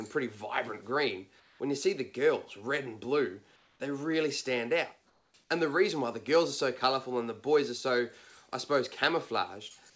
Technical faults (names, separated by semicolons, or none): comfort noise in place of the background